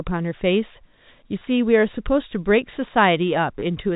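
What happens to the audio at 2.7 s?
Nothing goes wrong at 2.7 s: the speech carries on intact through that moment, with the band-limited sound of a G.711 telephone line and no dropout, click or distortion.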